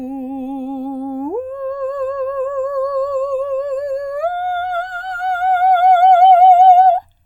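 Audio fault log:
throughout, channels drifting apart: the two sides of the music run on clocks differing by roughly 200 ppm, so their offset grows to about a millisecond by the end. Summed to mono, the comb notches sweep slowly through the spectrum, heard as gradual flanging.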